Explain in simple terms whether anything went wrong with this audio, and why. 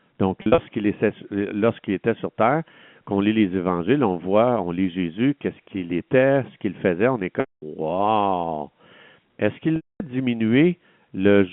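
Yes, there is packet loss with pitch repetition. At 0.42 to 0.58 s, brief scattered losses sound like a held, buzzy tone. At 7.40 to 7.62 s and 9.76 to 10.00 s, the repeated tone fades to silence before the speech cross-fades back. Unlike a plain dropout, the gaps are filled with a looped tone rather than a hard cut.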